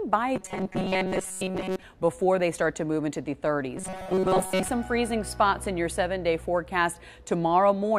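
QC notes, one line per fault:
0.36–1.83 s, robotic sound from repeated short buffers: the audio turns into a rigid metallic buzz at 188 Hz, likely from a roughly 5.3 ms chunk being looped in place of most of the real audio.
3.77–4.69 s, robotic sound from repeated short buffers: the same 188 Hz buzz returns, likely with the repeated chunk covering most of the span and the true audio only loosely tracked underneath.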